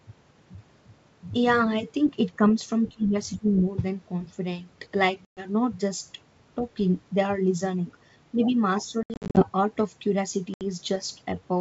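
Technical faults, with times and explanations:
2.36–2.56 s, 2.89–3.15 s and 3.38–3.47 s, speech suppressed in double talk: the speech dips in level three times in quick succession. The first dip is shallow, about 5 dB. The second and third cut deeper, to about 20 dB down, with the middle one lasting roughly a third of a second. This is likely an echo canceller that could not separate this talker from loudspeaker echo while both sides spoke and so attenuated everything.
5.25–5.42 s, 9.03–9.46 s and 10.54–10.62 s, packet loss on an ADPCM call: hard-edged silent gaps replace the lost audio, about 120 ms at the first point, 230 ms scattered across the second stretch with no hole longer than 70 ms, and 70 ms at the last. Each gap is followed by speech returning slightly distorted, as the decoder's adaptive predictor and step size are out of step with the sender's and take some tens of milliseconds to catch up.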